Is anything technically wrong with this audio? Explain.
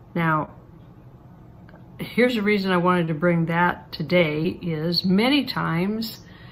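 Yes. There is short concealed packet loss at 0.45–0.49 s, 3.05–3.09 s and 4.43–4.46 s. Each time, about 20 ms of audio failed to reach the decoder in time, and the receiver covered the gap by extending the preceding sound, either from its pitch or as shaped noise, before blending back into the real signal. The synthesised fill ran about 18 ms in the first two gaps and 13 ms in the third, heard as a brief smear or wobble.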